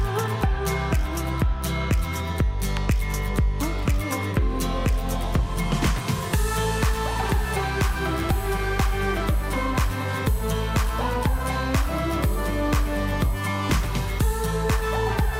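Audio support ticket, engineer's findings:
No dropouts, clicks, distortion or timing faults found on listening; signal path checks out with nothing to action.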